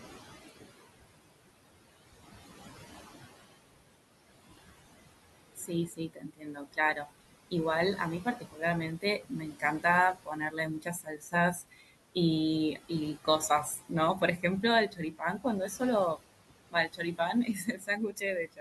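It's a speech recording with noise suppressor artifacts all the way through. The suppressor pulls the room noise down by about 19 dB between phrases and lets it come back under the talking, so the leftover noise pumps. There's also speech cut by the noise suppressor from 5.56 to 7.1 s, 7.97 to 8.63 s, 9.01 to 12.16 s, 12.75 to 15.82 s and 16.71 s to the end. In those stretches it mistakes quieter speech for noise and ducks it by as much as about 20 dB, adding up to a few seconds of soft sounds and word endings coming out swallowed or faint. The room noise itself sits about 13 dB under the voice.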